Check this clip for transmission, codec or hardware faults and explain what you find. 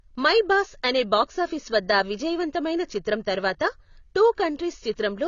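One codec fault runs through the whole speech recording.

Throughout, the likely cause is AAC compression. Nothing is present above 7 kHz, and the codec damage is plainly audible as a dull, smeared sound with a warbling fizz on sibilants, which fits AAC-LC near 24 kbps. A plain low-pass filter would dull the sound without that shifting, watery texture. The encoder starves each frame of bits, so it quantises coarsely and drops the top band.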